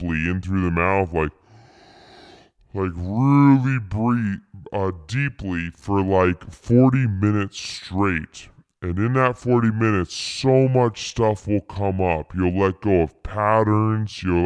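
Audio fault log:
Throughout: wrong sample rate. The speech plays at about 0.69 times its proper speed and sits about 6.5 semitones low, so voices sound heavy, drawn out and sluggish. That ratio fits audio captured at 32 kHz but played back at 22 kHz with no conversion. On a spectrogram, harmonics and formants sit lower and everything is squeezed below about 11 kHz. The waveform looks stretched in time, with syllables and pauses noticeably longer.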